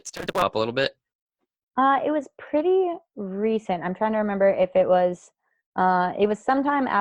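A block size mismatch (truncated) from 0 to 0.43 s drops each block's tail, giving a 188 Hz buzz and 1.88× faster speech at near-normal pitch, fitting 256-sample reads.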